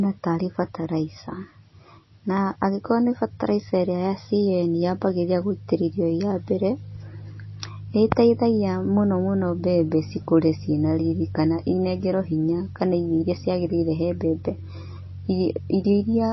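Throughout, the speech has a hard treble ceiling near 5.8 kHz and watery, swirling artefacts. This is likely MP3 compression, consistent with roughly 24 kbps.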